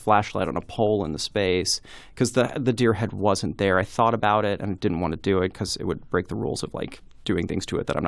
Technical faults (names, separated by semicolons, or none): none